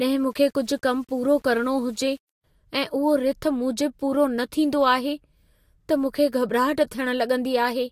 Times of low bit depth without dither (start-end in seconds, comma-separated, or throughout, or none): 0.30-2.44